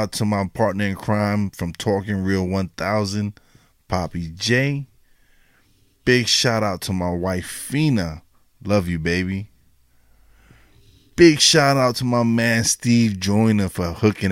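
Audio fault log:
Nothing stood out on listening to this speech recording.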